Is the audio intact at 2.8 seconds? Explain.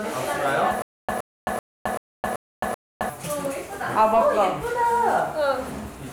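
No. From 0.82 to 3.09 s there is a stutter with silent gaps. The player or stream likely stalled, and each retry replayed the last fragment before running dry. A burst of about 119 ms sounds six times at an even pace, one every 384 ms, each followed by about 266 ms of digital silence. At 2.8 s you hear this loop, and the audio that belonged to that stretch is missing.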